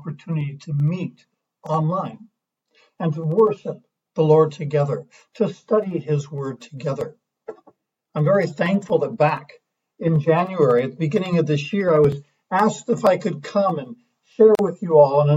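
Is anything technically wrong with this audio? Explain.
Yes. At 14.55 s the audio drops out into a silence of about 38 ms, ending at 14.59 s, then resumes where it stopped. This is a gap at a join of encoded pieces: separately encoded segments were spliced untrimmed, leaving encoder delay and final-frame padding in place.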